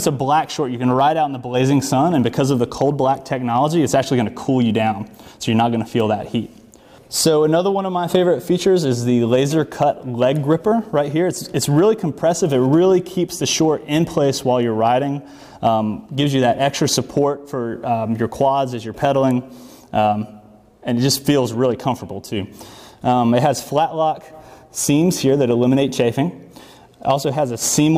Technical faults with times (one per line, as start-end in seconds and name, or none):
none